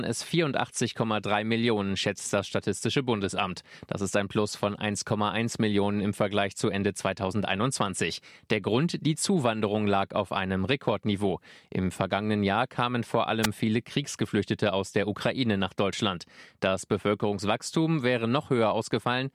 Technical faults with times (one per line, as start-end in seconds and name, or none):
13.42-13.47 wireless microphone noise hit